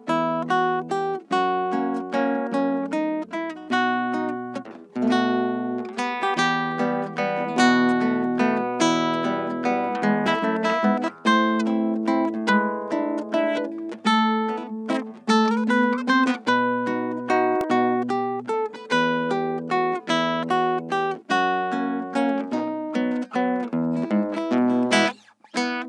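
At 10.27 s and again at 17.61 s, a repeated buffer occurs: fresh audio arrived late, so a piece of about 1.45 ms, which fits a 64-sample buffer, replays once, then twice. Unlike a dropout, no audio goes missing; each is heard as a click or brief buzz.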